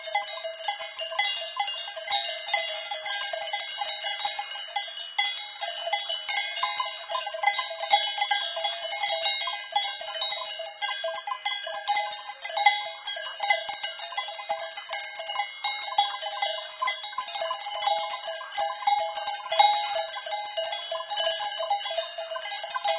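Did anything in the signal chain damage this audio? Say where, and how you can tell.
No, nothing in the signal chain damaged this audio.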